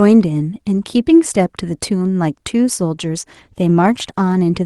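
At 3.25 s a call bitrate drop sets in: the bandwidth estimate falls and the encoder is made to spend roughly half as many bits, which fits a drop from 32 kbps to 16 kbps. With fewer bits per frame the speech is quantised more coarsely, so from 3.25 s to 4.45 s it turns rough and smeared. The reduced rate holds for about 1.14 s before quality returns just before the clip ends.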